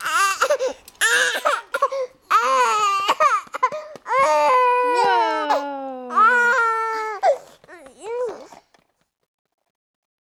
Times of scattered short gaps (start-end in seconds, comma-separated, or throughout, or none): none